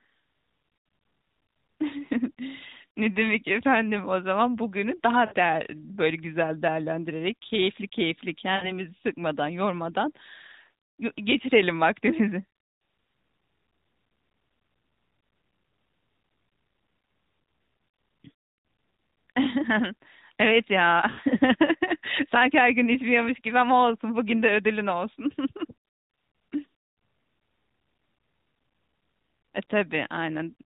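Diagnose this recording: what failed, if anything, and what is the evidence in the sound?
Lost AMR speech frames, at the radio link into the narrowband decoder. The speech smears and fades at 5.26–5.35 s, 8.56–8.73 s and 21.10–21.19 s, which fits three or four missing 20 ms frames. The decoder stretched its last pitch and vocal-tract settings while fading the gain.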